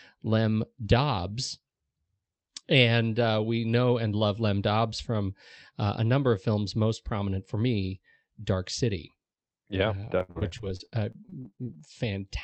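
Speech that turns choppy and robotic from 10.05 to 11.83 s, with pieces missing and gaps up to 61 ms. This is repeated packet loss: lost packets are patched by stretching the previous sound, concealing about a quarter of that stretch, over a call path band-limited near 8 kHz.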